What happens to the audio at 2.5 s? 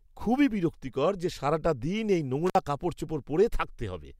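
Right after "যে সারাটা দিন এই", an intermittent contact breaks the speech from 2.46 to 2.55 s: a loose connection opens for about 53 ms, crackling at each edge. The waveform shows a near-flat gap framed by sharp spikes; the spectrogram shows broadband clicks around a faint hiss floor.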